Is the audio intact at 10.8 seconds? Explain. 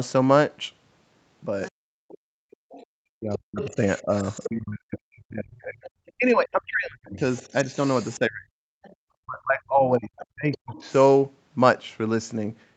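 No. At 10.8 s the talker's speech is still being pushed down in pieces, near the end of a stretch of speech suppressed in double talk that runs from 3.19 to 10.82 s. Across about five seconds in total the voice dips and drops out, at its deepest by around 40 dB. The likely cause is an echo canceller that, with both parties talking at once, couldn't tell the near talker from loudspeaker echo and attenuated both.

At the same moment a second, fainter voice is audible underneath: the other side's voice leaking through, from 10.18 to 10.93 s, sitting roughly 20 dB below the talker. This is likely the far end's audio played on the talker's loudspeaker and picked up again by the microphone, with the canceller failing to remove all of it before sending it back.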